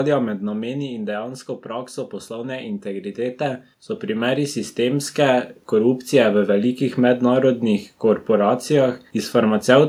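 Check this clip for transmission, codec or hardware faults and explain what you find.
Two automatic gain control problems show up in this speech clip, both level swings rather than codec or transmission damage.

From 0.05 to 1.43 s there's automatic gain falling. The speech starts hot, so the gain control decides it's too loud and eases down by about 8 dB. You hear the voice and the room behind it sink together over that stretch.

Then from 1.66 to 6.83 s comes automatic gain rising, the opposite move. The control now reads the input as too quiet and slowly pushes the gain up about 12 dB, so speech and background swell together over roughly five seconds.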